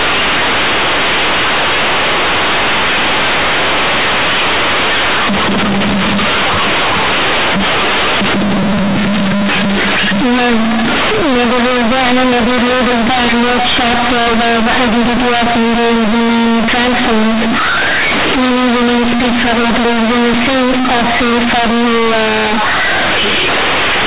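From start to end, the speech is hit by companded audio read as linear. A-law bytes are played as plain 8-bit samples without expansion. Every sign change swings the output hard. Quiet parts become as loud as loud ones. The result is harsh, buzzy distortion with loud noise through the pauses, on top of the narrow 4 kHz telephone band.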